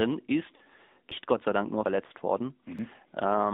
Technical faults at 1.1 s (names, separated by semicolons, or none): AMR narrowband mobile codec; dropped buffer (overrun)